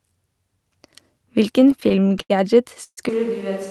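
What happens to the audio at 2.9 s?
Right around there, from 2.83 to 2.99 s, you get a call audio freeze: the last bit of speech smears into a fading buzz, then about 60 ms of silence, and the speech picks up where it left off, 135 ms late but complete, likely because delayed packets drained the jitter buffer.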